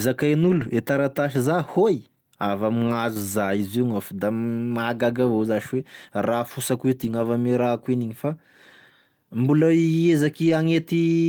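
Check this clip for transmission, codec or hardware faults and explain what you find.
The clip has a transmission fault: lost packets rebuilt from error correction, at 0.43–0.69 s, 2.87–2.93 s, 7.03–7.25 s and 10.45–10.51 s. Each time, the following packet carried a low-bitrate copy that the decoder played instead, so the speech briefly turns rougher and noisier without a break. Unlike plain loss concealment, these stretches keep the real speech instead of a smeared guess.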